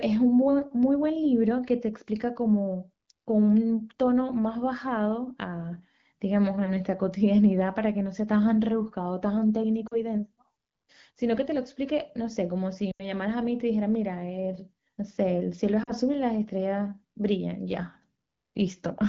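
Lost AMR speech frames break up this speech clip at 9.87–10.02 s, 12.91–13.08 s and 15.83–15.92 s. Radio errors corrupted frames, and the decoder filled each gap by repeating its last good pitch and vocal tract settings at falling gain, so the sound drops to near silence within two frames. The middle event is longest at about 80 ms, consistent with four frames, against about 40 ms for the others, so its silent stretch lasts longer. The wideband AMR coding itself sounds clear, which fits a 12.65 kbit/s HD Voice rate.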